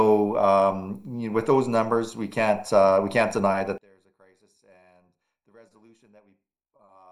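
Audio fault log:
3.78–7.12 s, one channel inverted: in mono the sound drops by about 32 dB and turns faint, likely from polarity cancellation. The waveform collapses and the spectrogram empties across the band.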